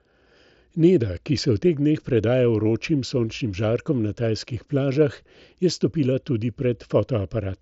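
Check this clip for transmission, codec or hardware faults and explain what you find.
No faults found; the speech shows only the normal band limit of a Bluetooth mSBC headset link, with nothing above 7.7 kHz.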